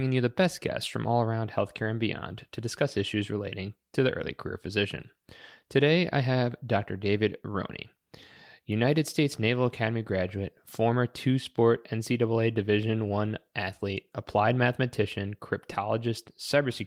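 Nothing technical goes wrong anywhere in this bit of speech, so there's no fault to point to at any moment.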